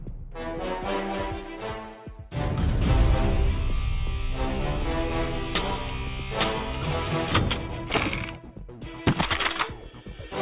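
No dropouts, distortion, noise bursts or timing breaks come up anywhere in the recording, so there is nothing to flag.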